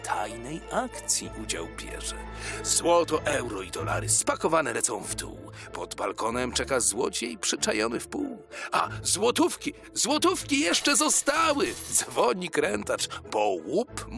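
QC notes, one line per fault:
No faults heard.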